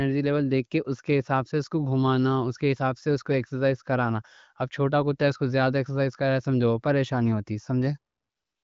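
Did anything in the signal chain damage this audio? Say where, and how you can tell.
No, nothing in the signal chain damaged this audio.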